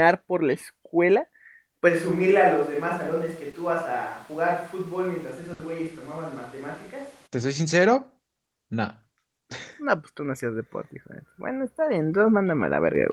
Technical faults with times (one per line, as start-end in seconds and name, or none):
1.90-7.25 switch to a distant microphone
3.51-3.55 short concealed packet loss
5.53-5.61 burst of packet loss